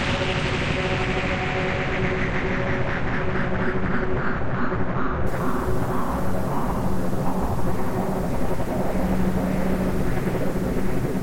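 From 5.27 s to the end at 11.23 s, the audio turns grainy. This is low bit depth without dither. A rough, gritty distortion rides on the sound and shifts as the sound shifts. It is loudest in relative terms during quiet passages, where the fine detail breaks up into a coarse buzz. The error sits roughly 25 dB below the signal. The likely cause is truncation to very few steps, which fits a 6-bit signal with no dither.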